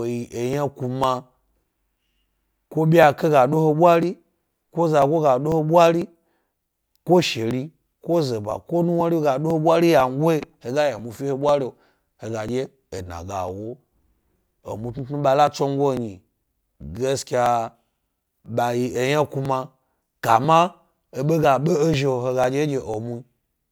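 Periodic USB or driver dropouts run from 0.53 s to 23.43 s, recurring every 0.498 s, so roughly twice a second across nearly the whole speech clip. Something on the system is stalling the USB link or audio driver on a fixed cycle, and each stall skips a couple of milliseconds of samples outright rather than padding with silence. The splice leaves a tick, about fifty in all, evenly spaced and audible only while speech is present.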